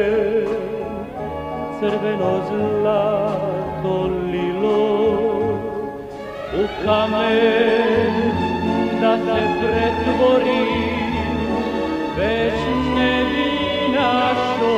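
From 6.23 s until the end, everything is heard twice: a second full-band copy trails the original by roughly a third of a second, somewhat quieter, with no reverberant tail or room colouring, and it cuts in abruptly. This is a doubled audio track. The likely cause is the same signal reaching the mix through a second, slower path, or an edit leaving two out-of-step copies layered together.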